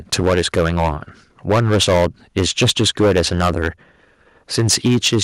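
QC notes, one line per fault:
0.13–0.93 s, 1.49–2.06 s, 2.37–3.68 s and 4.58–5.19 s, microphone overload: the loudest stretches of speech turn harsh and crackly, with peak tops flattened. The likely cause is input gain set so high that the signal ran about 8 to 12 dB past the converter's ceiling. Roughly a tenth of samples are cut in most passages, and about a fifth around 1.49–2.06 s, where the overdrive is worst.
0.28 s and 4.87 s, microphone volume stepped down: the voice and background each drop suddenly by about 2 dB, in the middle of the overloaded passages at 0.13–0.93 s and 4.58–5.19 s. These are likely single-step cuts to the device's input volume by the call software after it detected clipping. Each cut is too small to stop the flattening, so the crackle continues after both steps.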